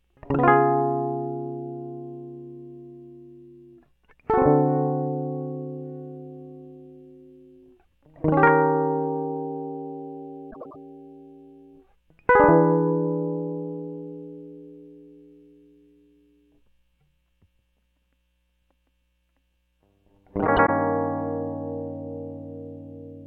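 Around 10.51 to 10.76 s, and again at 20.47 to 20.69 s, the music hiccups with frames out of order: two neighbouring chunks of roughly 96 ms each got swapped, so the passage plays back-to-front in halves, a garbled flutter, nothing actually lost.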